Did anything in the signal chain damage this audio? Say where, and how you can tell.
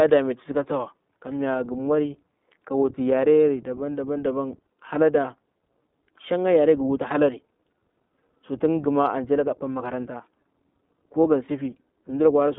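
Yes. The codec stage did the most damage: the speech has gone through the iLBC codec for the whole clip. The sound is band-limited to roughly 200 Hz to 3.7 kHz, with a plainly audible rough, synthetic edge that comes from coding each frame's excitation on its own. On a spectrogram, energy stops sharply at 3.7 kHz with nothing above it. The 20 ms frame rhythm fits iLBC's 15.2 kbps mode.

The network stage added lost iLBC frames at 11.22 to 11.25 s, where a single 20 ms frame is missing. The decoder covered the gap by repeating the last pitch cycle mixed with noise, so the gap sounds like a brief buzzy hold rather than silence. The waveform shows a short stretch of repeated periods, and the spectrogram shows flat, smeared harmonics there. The next frame decodes cleanly at once, because iLBC frames do not depend on earlier ones.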